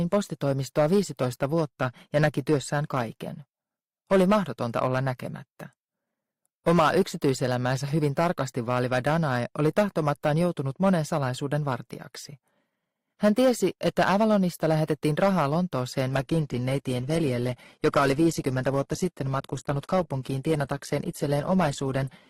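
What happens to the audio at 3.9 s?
At 3.9 s, as throughout the clip, there is hard clipping: the signal is driven about 8 dB past what the stage can pass, so peaks are sheared flat. Only a small share of samples, around one and a half percent, hit the limit, adding high harmonics heard as crackle on loud peaks.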